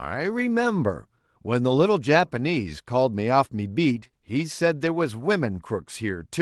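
A speech clip carried over a WebRTC call path, with Opus-style coding and content that stops near 12 kHz. Within about a sixth of a second it has two kinds of packet damage. Two lost packets were rebuilt from error correction, at 3.95–3.97 s and 4.03–4.05 s. Each 20 ms stretch was replayed from a low-bitrate redundant copy, so it sounds rougher and grainier, and on a spectrogram it shows a coarser, noisier texture. Two short concealed packet losses fall at 3.99–4.03 s and 4.07–4.11 s. There each missing 20 ms was filled by extending the preceding sound, heard as a brief smear or wobble.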